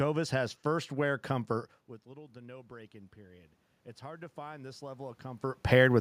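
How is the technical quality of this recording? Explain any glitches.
The recording has one glitch, automatic gain rising, from 2.12 to 5.72 s. The input level fell by about 20 dB after the talker moved away around 1.5 s, and the automatic gain control responded by slowly raising its gain about 9 dB. The voice and the room noise behind it swell together over those 3.6 seconds instead of holding steady.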